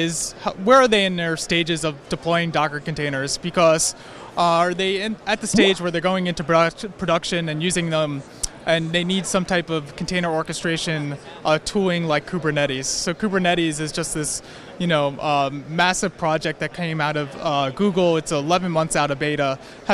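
No technical faults are audible anywhere in the audio.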